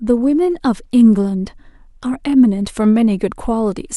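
A short speech recording with nothing technically wrong to report. No event in it calls for a time, a value or a cause.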